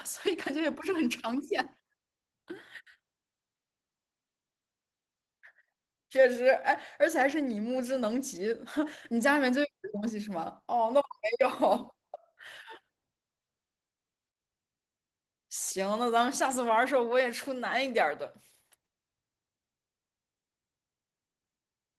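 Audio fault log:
Throughout: Opus voice compression at 16 kbps in hybrid mode, whose coarse speech coding and thin upper-band layer leave the speech audibly muffled, hoarse and faintly robotic.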